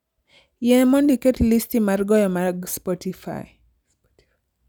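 Nothing in this speech recording stands out as a technical fault, so there's no problem here to point to.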